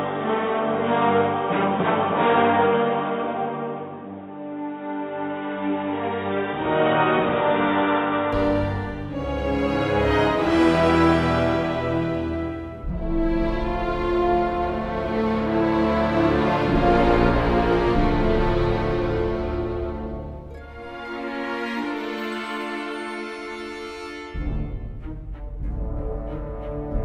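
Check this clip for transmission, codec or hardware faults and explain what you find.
One fault: for the opening 8.33 s the audio is band-limited, most likely because the input was switched to a poorer device, such as a second microphone or a headset in its call profile. Such a device passes nothing above 3.8 kHz and adds its own noise floor, roughly 30 dB below the signal. The sound is dull and boxy, then opens up abruptly at 8.33 s with no gap and no obvious level jump. On a spectrogram, energy stops at a hard ceiling near 3.8 kHz, then extends upward from 8.33 s; the waveform shows no silence at the switch.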